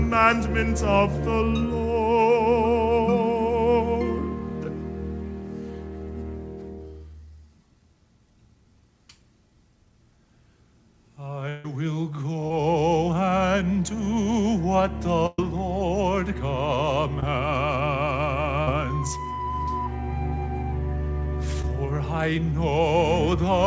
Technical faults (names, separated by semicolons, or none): long network dropout; short concealed packet loss; burst of packet loss